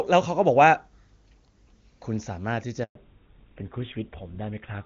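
At 2.83 s a handover gap silences the speech for 120 ms while the call changes networks; it fades quickly to clean silence rather than stuttering like packet loss. From 2.95 s a fallback to narrowband removes everything above 4 kHz, and the voice turns rougher as well as duller, which fits a switch from HD Voice to a GSM-type codec rather than simple filtering.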